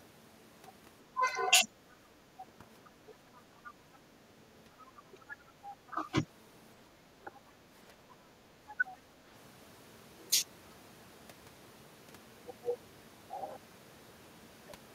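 Speech recording where the far end is heard through the talker's microphone. Other side's voice leaking through occurs from 1.91 to 5.9 s and again from 8.69 to 8.97 s, about 20 dB below the talker. This is likely residual loudspeaker echo that the echo canceller left in. Speech suppressed in double talk appears in the same overlaps. Between 1.18 and 3.14 s there are brief dips of about 10 dB. Between 5.07 and 6.18 s the level drops by about 20 dB for a few tenths of a second in total. At 8.8 s there is a shallow dip. These dips are likely the canceller attenuating everything while both sides talk.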